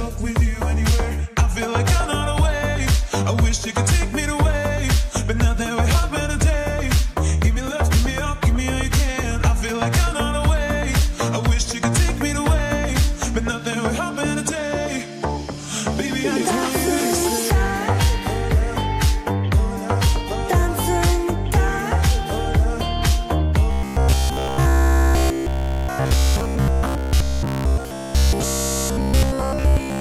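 From 23.71 s to the end at 30.01 s, new audio likely stopped arriving in time, so the software kept repeating a short buffer. The result is robotic sound from repeated short buffers: essentially everything is a rigid, metallic buzz pinned near 66.7 Hz, matching a repeating slice of about 15 ms.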